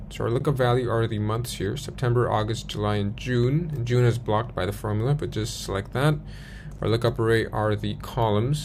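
At 0.40 s and again at 6.78 s there's a block of digital silence, each about 10.7 ms long. That length fits a 512-sample buffer that never got filled in time, so the output just dropped to zeros for one block. The sound cuts out and comes back with no fade, and at under about 15 ms each hole is too short to hear as a gap. What you get is a tick or dip.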